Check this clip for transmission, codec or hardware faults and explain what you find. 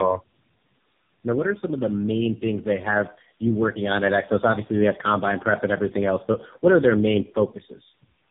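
One fault runs through the whole clip: tandem speech coding. The speech passed through three low-rate speech codecs in a row, each re-encoding the previous one's damage, so it sounds rough, muffled and warbly, with nothing above 3.7 kHz.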